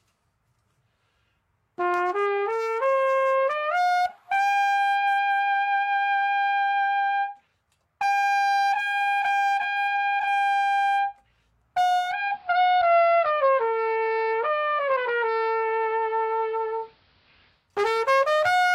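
At 11.97 s the sound shifts as a case of digital radio blending to analogue: the receiver lost its digital stream and cross-faded over about 233 ms to the station's AM broadcast, returning at 17.71 s. During that stretch hiss sits roughly 40 dB under the signal, and the level moves by about 1 dB. Unlike a simple filter or dropout, the change arrives and leaves as smooth fades, with noise riding along.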